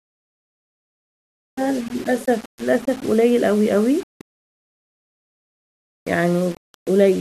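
From the first syllable to the end, the speech carries a grainy, gritty distortion that rises and falls with the voice rather than sitting underneath as steady hiss. The quiet tails of words get the roughest, breaking up into a buzzy sputter before dropping to silence. That's the signature of low bit depth without dither, likely from rounding to something like a 6-bit word, with the error only about 25 dB below the speech.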